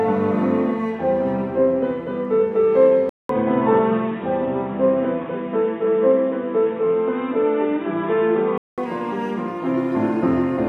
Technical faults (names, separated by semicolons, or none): input switched to a poorer device